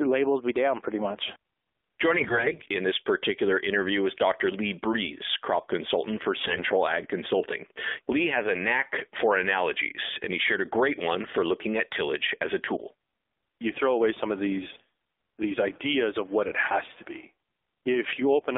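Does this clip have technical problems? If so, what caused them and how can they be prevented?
Yes. The whole clip carries the sound of an AMR narrowband mobile codec. Nothing passes below about 250 Hz or above 3.6 kHz. The speech comes from a vocal-tract model driven by sparse pulses, so it sounds buzzy and synthetic. The degree of coarseness points to a low mode around 7.4 kbps. To prevent it, record or route the call over a wideband path, or at least use a higher AMR mode.

There are also AMR bit errors from 2.12 to 2.62 s and from 6.40 to 6.70 s. Pitch and level hold, but the voice turns hoarse, scratchy and gargly. Flipped bits in the weakly protected parts of each frame put the excitation pulses in the wrong places and skew the finer gain and spectral values. The lengths fit about 25 and 15 damaged 20 ms frames, with roughly 7 percent of bits wrong. To prevent this, use a stronger radio link or better error protection.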